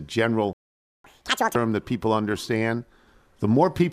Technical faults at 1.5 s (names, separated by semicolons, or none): catch-up at higher speed